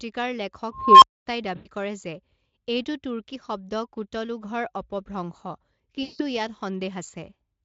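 From 0.72 s to 1.26 s an unstable filter takes over. A recursive filter with bad coefficients feeds back on itself, so a tone of around 1 kHz swells over about 0.3 s, clips, and then drops into roughly 0.24 s of silence while the filter resets. Unlike packet loss, it grows louder before the dropout.

At 1.55 to 1.68 s, and again at 6.03 to 6.21 s, there is VoIP packet loss concealed by the speech codec. About 100 ms and then 160 ms of audio are missing, and the decoder fills each gap by extending the last sound into a buzzy tone or coloured noise that fades. The gain falls rather than rises, and the sound stays weak briefly after packets return. The underlying Speex coding adds only faint colouring.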